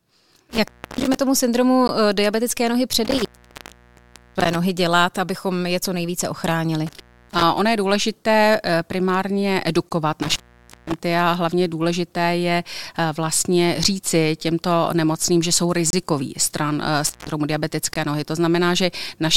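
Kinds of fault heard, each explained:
Intermittent contact: a loose connection briefly opening, so the speech drops out five times with crackly edges, from about 0.15 s up to over a second.
Gap between stream segments: timestamps not quite meeting, leaving four hard-edged silent holes of 15 to 28 ms, one right after "tomu syndromu", fitting 2-second segments.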